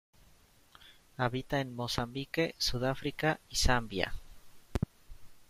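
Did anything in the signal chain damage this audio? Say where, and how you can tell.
Yes. Two loud pops cut through the speech: a single sharp crack from 1.98 to 2.01 s, roughly 20 dB above the signal, and a double pop from 4.75 to 4.85 s, about 15 dB up. The likely cause is a voltage transient in the analogue wiring, shaped into pops on top of the continuing speech.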